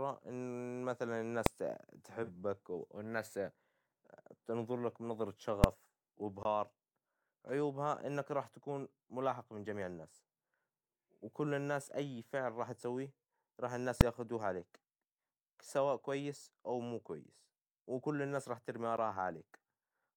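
Speech with three distinct kinds of fault. Invalid numbers at full scale strike at 1.46 s, 5.64 s and 14.01 s: a calculation went infinite or invalid and the output was pinned to its maximum value. The first burst lasts 0.67 ms, which fits a 32-sample block, and the other two last 2.67 ms, which fits a 128-sample block. Each is far too short to resolve as a start and end pop, so each lands as a single hard bang, louder than anything around it. At 2.23 to 2.30 s there is AAC frame loss with concealment. About 43 ms of audio, which fits one lost frame, was rebuilt by the decoder from the last good spectrum. The result is a brief smeared, noisy or phasey patch rather than a gap, and the surrounding level is kept, which separates it from a dropout. Blocks of digital silence appear at 6.43 to 6.45 s (20 ms) and at 18.97 s (10 ms). There the sound cuts out abruptly and returns without any fade. 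The 20 ms block leaves a short dead hole, while the 10 ms one is too short to be heard as silence and comes across as a tick or dip. That hole is what distinguishes the longer block from the full-scale faults, which add a loud bang instead of removing sound, and from the concealment, which fills the missing stretch with reconstructed texture instead of leaving it empty.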